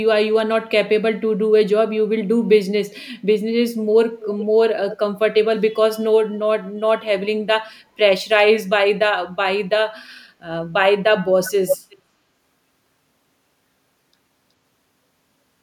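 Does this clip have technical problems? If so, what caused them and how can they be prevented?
Yes, echo leak at 4.2–4.46 s, 4.9–4.97 s, 11.46–11.51 s and 11.67–11.96 s: faint, then full-level, copies of the speech trailing by about 0.41 s and 0.37 s, likely from a far-end loudspeaker whose echo canceller let residue through. The spectrogram shows harmonic patterns repeated, shifted later. A headset or a better-converged canceller would prevent it.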